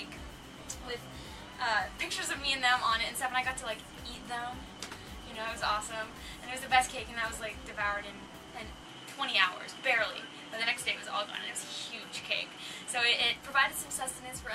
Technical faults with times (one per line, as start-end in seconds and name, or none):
8.85-13.21 input switched to a poorer device